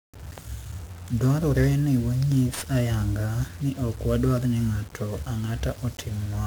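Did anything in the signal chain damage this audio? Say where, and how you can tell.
Yes, at the codec stage: heavy 1-bit DFPWM compression across the whole speech clip. Each sample becomes one up/down step, so coarse quantisation noise makes it fuzzy and crackly, with the treble buried in hiss. A spectrogram shows a dense broadband noise floor, even between phrases. The noise points to roughly 48 kbps.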